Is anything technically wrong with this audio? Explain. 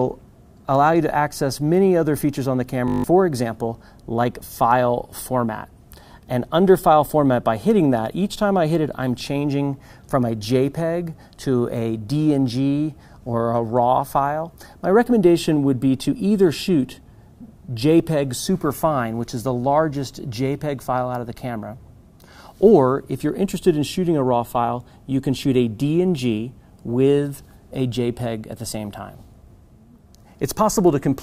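Yes, there's one problem. From 2.88 to 3.04 s you get a system hang loop: the machine or its driver stalled while the sound hardware kept replaying the same ring buffer. A 20 ms slice repeats exactly eight times, so instead of moving on, the audio turns into a steady buzz at 50 Hz, the loop rate. Around 150 ms of the real audio never comes through, and the sound picks up again after the buzz stops.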